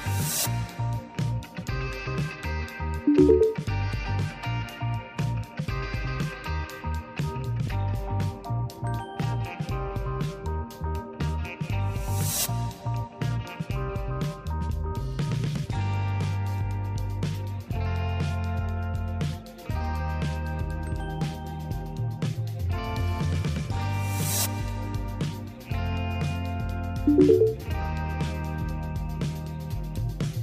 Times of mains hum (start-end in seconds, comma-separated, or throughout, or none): 23.62-30.43